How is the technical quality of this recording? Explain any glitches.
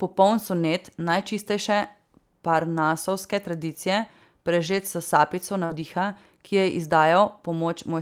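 The recording has packet-loss glitches in the speech: four stretches rebuilt from error correction and one brief concealed dropout.

Lost packet rebuilt from error correction occurs at 0.99–1.25 s, 2.53–2.59 s, 4.67–4.77 s and 5.70–5.84 s. The longest runs about 140 ms, the shortest about 40 ms. Each lost packet was replaced by a low-bitrate copy carried in the next packet, so the speech continues without a gap but sounds grainier and noisier while the copy plays.

Short concealed packet loss occurs at 5.65–5.72 s, where about 40 ms never arrived. The decoder extended the preceding sound to cover the hole, producing a brief smear or wobble rather than the coarse but intact texture of the rebuilt stretches. It leads straight into the final rebuilt stretch.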